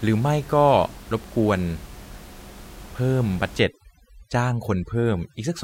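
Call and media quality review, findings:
Overdone noise removal, 3.60 s to end: room noise (about 22 dB below speech) drops and breaks up into twinkling specks. Suppressor zeroing near-noise bands; codec loss would keep the background.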